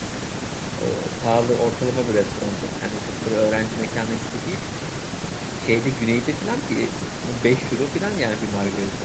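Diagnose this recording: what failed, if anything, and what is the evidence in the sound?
Nothing has failed here; the speech simply carries the normal marks of a call, with the microphone processing and codec leaving nothing above about 8 kHz, which is just how this path is set up.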